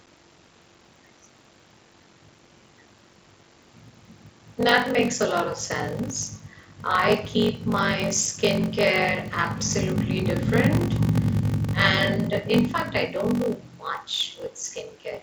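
A block size mismatch (padded) runs throughout this speech: each shorter block is zero-filled to fit larger reads, likely 1024 samples, causing a 46.9 Hz buzz and 0.861-times speed at unchanged timbre.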